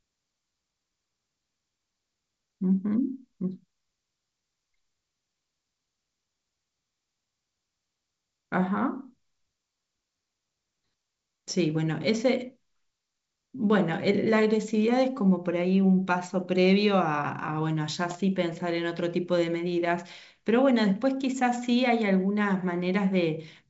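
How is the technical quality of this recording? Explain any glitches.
There is one glitch, a short burst of bit errors on an ADPCM link. The G.722 wideband coding itself adds little or no damage.

From 18.08 to 18.17 s, flipped bits at an error rate of about 0.15% upset the decoder's step size and predictor. The result is a brief rough, poppy burst with a momentary level change.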